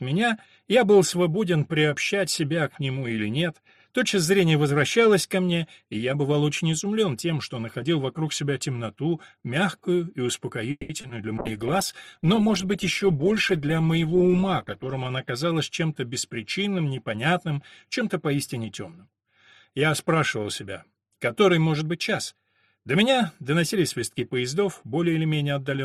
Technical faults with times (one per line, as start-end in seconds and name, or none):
10.71-10.91 call audio freeze
11.01-11.11 short concealed packet loss
11.39-15.15 call bitrate drop
21.41-22.11 jitter buffer speed-up
22.77-24.34 jitter buffer speed-up